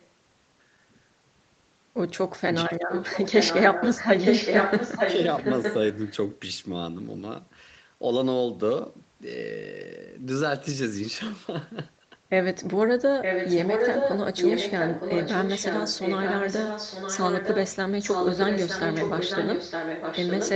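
At 0.00 to 0.07 s a faint echo leak appears, about 35 dB below the speech. It is a copy of the voice arriving 915 ms late, likely from a far-end loudspeaker whose echo canceller let some of the microphone pickup through. On a spectrogram it shows as a weak ghost of the harmonic pattern, shifted right by just under a second.

From 2.66 to 2.90 s comes speech suppressed in double talk. The voice dips by roughly 10 dB in short pieces totalling around 150 ms. The cause is likely an echo canceller that, with both sides active, could not tell its own talker from the returning echo and turned everything down. The waveform envelope shows brief notches, and the spectrogram shows the upper harmonics thinning or vanishing within the 8 kHz band of the call.

The echo leak returns strongly from 2.89 to 6.15 s and from 13.22 to 14.20 s, at about the same level as the speech. A second voice copy trails 915 ms behind and blurs the words into a doubled, smeared sound. 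It is slightly weaker, about 5 dB down, from 14.36 to 17.76 s and from 18.01 to 20.51 s. The spectrogram shows overlapping, time-shifted harmonic stacks, and the waveform loses its gaps between syllables.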